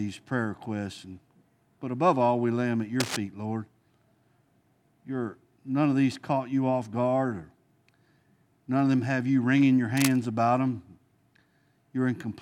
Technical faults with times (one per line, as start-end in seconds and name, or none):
3.00-3.17 cable scratch noise
9.97-10.17 cable scratch noise